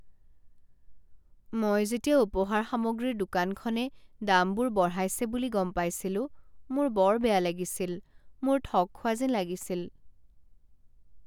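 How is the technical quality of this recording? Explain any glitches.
No glitches or faults heard.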